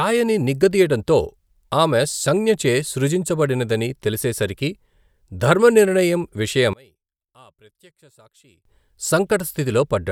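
From 6.73 to 8.65 s the speech nearly vanishes, dropping about 31 dB to a faint trace; one channel inverted likely cancels the centred sound in the mono sum.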